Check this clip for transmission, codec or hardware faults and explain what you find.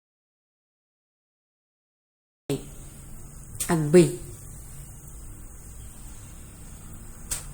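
Two kinds of fault are present: an audio dropout to silence at the start, and two points where compressed frames were skipped.

From the start to 2.50 s there is an audio dropout to silence: silence with no room tone, unlike a noise gate. The speech input was likely lost, while the recorder kept writing.

At 3.49 s and 6.64 s compressed frames were skipped, jumping roughly 100 ms and 150 ms ahead in steps that fit a 24 ms frame.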